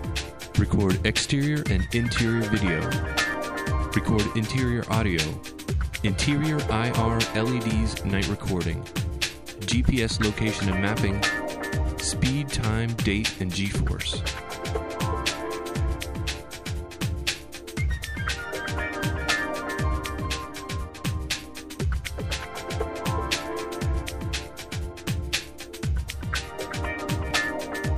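At 27.31 s there is a brief skip where a few milliseconds of sound drop out and the two sides butt together with no gap. This is likely audio missing between chunks, with a piece lost at a boundary in 6-second chunked processing.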